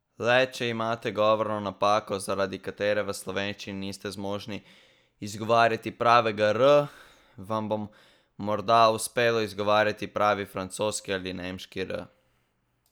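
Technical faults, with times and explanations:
No technical faults detected in this speech recording.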